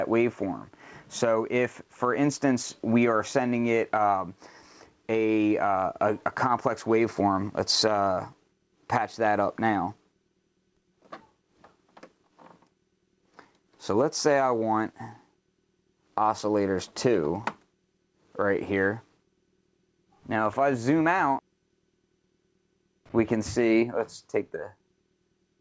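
No technical faults occur at any point in the clip; the audio comes through a G.722 call path at 64 kbps, which leaves nothing above 8 kHz.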